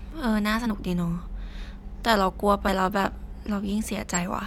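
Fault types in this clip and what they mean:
Compressed frames skipped: whole blocks of encoded audio go unplayed, so the speech jumps ahead by about 50 ms at 0.65 s and 2.67 s. The speech simply jumps on at each join, unlike a dropout's silent hole.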